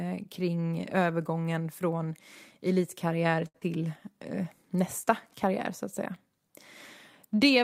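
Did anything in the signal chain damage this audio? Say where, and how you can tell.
Yes. All three faults come from the network and the receiver's jitter buffer, clustered between 3.47 and 4.14 s.

Short stall from a late packet, 3.47 to 3.56 s: a packet arrived late, the buffer emptied, and the receiver held the last sound for 70 ms before resuming exactly where it stopped. Nothing is lost, but that sound lingers with a slight buzz or dip. On a spectrogram the harmonics run flat and unchanging for that stretch, and the waveform shows a repeating, slightly decaying cycle. Playback delay grows by 70 ms.

Short concealed packet loss, 3.60 to 3.63 s: about 40 ms of audio never reached the decoder, and the receiver extrapolated 10 ms from the preceding sound and crossfaded back in. It heard as a quick smear or wobble. The spectrogram shows a brief blurred patch with softened harmonics and a seam where real audio returns. 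The waveform shows a short repeated or noisy segment. Because the audio jumps ahead, delay drops by roughly 30 ms.

Jitter buffer slow-down, 3.82 to 4.14 s: the buffer rebuilt its reserve by repeating single pitch periods, adding 37 ms so this stretch plays at 91% speed with unchanged pitch. Sounds are drawn out. On a spectrogram, formant movements are stretched horizontally while harmonic spacing stays constant. The waveform shows runs of near-identical cycles.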